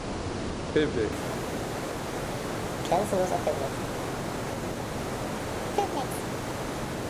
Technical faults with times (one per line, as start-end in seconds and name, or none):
1.12-7.09 wrong sample rate